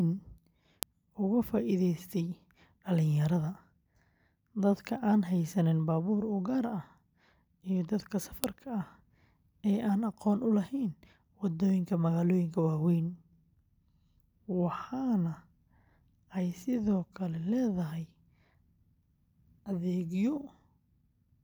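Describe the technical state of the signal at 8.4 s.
At 8.44 s, just after "iyo dadka", a file header is played as audio: the bytes of a WAV header at a join are read as samples, giving one sharp, loud snap. Unlike clipping, it is independent of signal level and lands exactly on a piece boundary.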